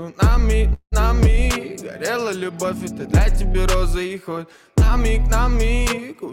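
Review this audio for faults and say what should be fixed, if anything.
Call audio freeze from 0.73 to 0.94 s: the last sound continues as a fading buzz, then about 80 ms of silence, likely from delayed packets draining the jitter buffer. Playback resumes where it stopped, losing nothing but running 185 ms later. A deeper adaptive jitter buffer and a more stable network path would stop this.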